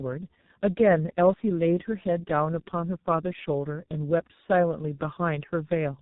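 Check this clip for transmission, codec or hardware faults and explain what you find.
The clip shows one fault, present across its whole length: tandem speech coding.

Tandem speech coding, throughout. The speech was decoded and re-encoded by two low-rate speech coders in sequence, with the second working on the first's already damaged output. The sound points to an iLBC stage followed, across a G.711 link, by G.723.1 at around 6.3 kbit/s. The errors compound, leaving the speech rough, muffled and warbling, with nothing above about 3.8 kHz.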